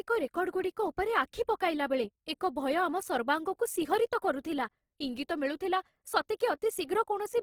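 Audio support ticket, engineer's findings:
Grainy, rough texture on the speech throughout, clearly audible. Likely Opus compression: music-mode encoder filling starved bands with folded or noise content rather than leaving holes, so less swirl, more a gritty edge. Fits a low rate, around 16 kbps. Bandwidth stays wide, content up to about 20.2 kHz, so no muffling.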